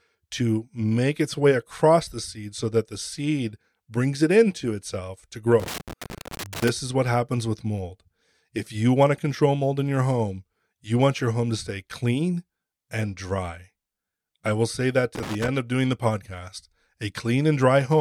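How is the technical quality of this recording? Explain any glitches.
Two bursts of loose connector crackle, from 5.60 to 6.69 s, after "it into itself to", and 15.15 to 15.48 s, after "I will say that". A worn contact making and breaking chops the speech into irregular scratchy crackle.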